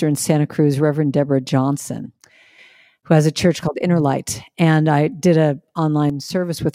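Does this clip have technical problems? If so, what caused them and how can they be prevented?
Yes. One channel drops out, likely a lost stereo channel, at 2.06–2.58 s (before "who has a church") and 6.10–6.57 s (after "I did an"), so the mono speech dips about 6 dB. Securing connectors and monitoring both channels' meters prevents this.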